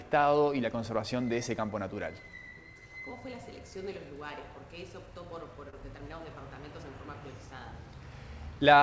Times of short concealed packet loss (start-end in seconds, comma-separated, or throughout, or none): 5.70-5.74